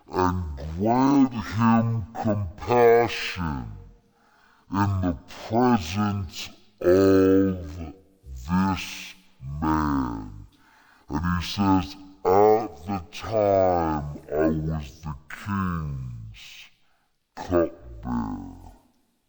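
A speech recording with one fault running its whole length: stereo read as mono. Left and right samples were taken in turn as a single channel. Everything plays at half speed and a full octave low. A fainter mirrored copy sits in the upper spectrum.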